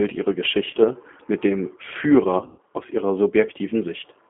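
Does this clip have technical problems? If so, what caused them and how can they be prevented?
Yes. G.729 codec damage runs throughout. The speech is band-limited to roughly 200 Hz to 3.4 kHz and sounds rough and synthetic, which fits G.729A at 8 kbit/s. To prevent it, use a wideband codec such as G.722 or Opus when bandwidth allows.

VoIP packet loss concealed by the speech codec occurs at 0.71 to 0.76 s, just before "mit dem", and at 2.38 to 2.60 s, just before "aus ihrer". In both places the decoder stretches the last frame into a fading sound. The second gap sounds like several scattered losses, one lasting about 120 ms. To prevent it, reduce network loss with QoS prioritisation and add forward error correction or redundancy.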